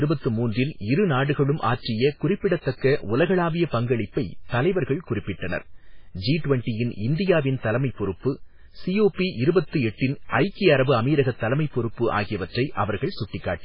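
Speech throughout, with heavy codec damage from start to finish, likely MP3 compression at a very low bitrate, around 16 kbps. Nothing above 5.3 kHz survives, and the starved encoder drops weaker frequency lines from frame to frame, so the sound turns watery and swirly and attacks smear.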